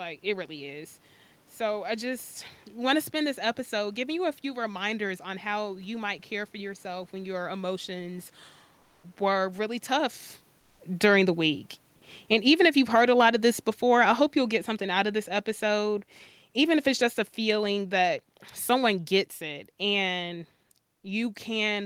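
A speech recording in which, just after "yourself when your emotions", the background from 8.79 to 9.03 s and again from 10.59 to 10.79 s is comfort noise in place of the real background, likely from discontinuous transmission in an Opus encoder; on a spectrogram those gaps show smooth, featureless noise about 1 to 2 dB quieter than the room noise around them. At 9.00 s the onset is likely clipped by the voice detector: 30 ms of the start is missing, so the waveform jumps straight to full level. From 9.22 s to the end, automatic gain is falling, and the waveform envelope and background shrink together, apart from the level shift around 10.0 s where the talker moved.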